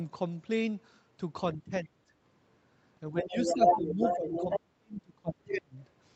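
Speech that dips sharply, by roughly 25 dB from 1.56 to 2.11 s and up to about 35 dB in pieces from 3.11 to 5.78 s, is speech suppressed in double talk, likely from an echo canceller turning down the talker while the far end spoke. A second voice, the other side's voice leaking through, is heard at about the talker's own level from 3.17 to 4.6 s and briefly at 5.5 s, likely residual loudspeaker echo the canceller failed to remove. The top end stops near 8 kHz, consistent with an Opus call path at about 32 kbps.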